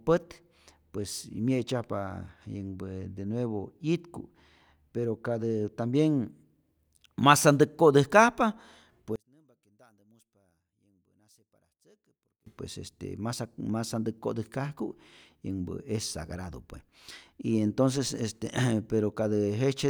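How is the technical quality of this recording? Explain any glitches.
The recording has one clear glitch, between 9.16 and 12.46 s, where the speech collapses to a faint residue, dropping by about 34 dB before returning just ahead of "pues este masat masantäk". The likely cause is one channel inverted: with one stereo side in reversed polarity, the centred voice and its low end cancel when the channels are summed to mono, leaving only the small difference between them as a weak trace.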